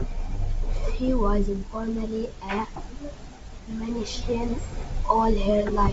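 Speech carried over G.722 wideband telephone coding at 64 kbit/s, with nothing technically wrong to report.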